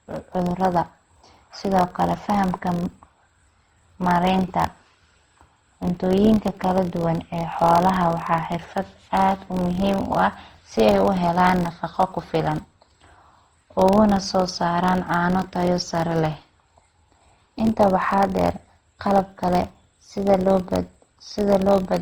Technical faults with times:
0.00-22.02 filter restarted on every block
0.00-22.02 generation loss

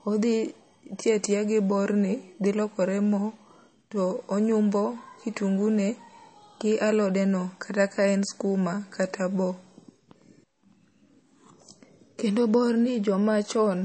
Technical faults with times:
0.00-13.85 MP3 compression

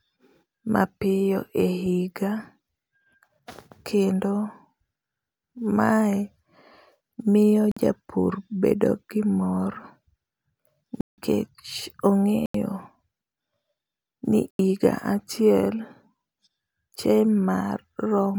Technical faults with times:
7.71-7.77 block of digital silence
11.01-11.18 block of digital silence
12.46-12.54 block of digital silence
14.51-14.59 block of digital silence

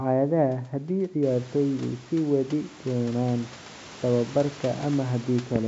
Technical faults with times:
none

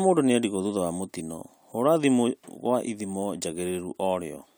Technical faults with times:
none

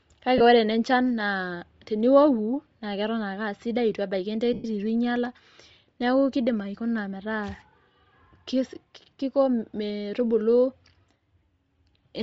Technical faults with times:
0.00-12.22 Bluetooth LC3 compression
0.38-0.41 lost LE Audio frames
4.53-4.65 lost LE Audio frames

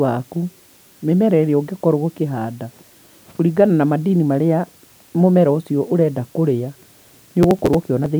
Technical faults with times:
0.00-8.20 low bit depth with dither
7.43-8.06 processor overload crackle

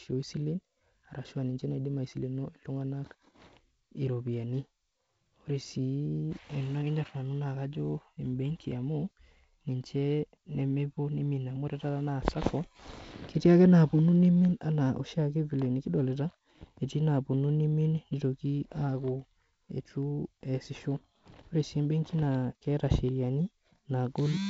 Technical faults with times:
none

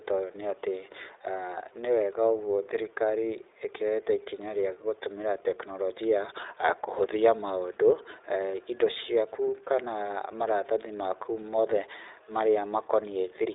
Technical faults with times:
0.00-13.54 iLBC codec

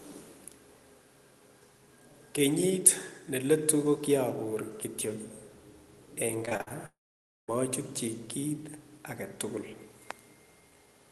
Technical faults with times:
6.45-6.72 repeated packet loss (robotic sound)
6.86-7.50 long network dropout

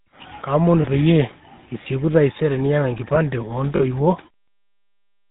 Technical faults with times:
0.00-5.30 GSM full-rate codec
0.82-0.85 lost GSM frames
3.76-3.84 lost GSM frames

